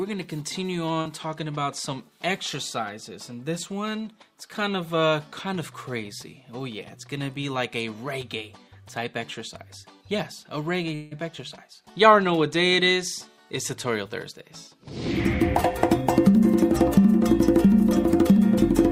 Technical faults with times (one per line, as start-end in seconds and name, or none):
1.01-1.07 short concealed packet loss
10.95-11.13 long network dropout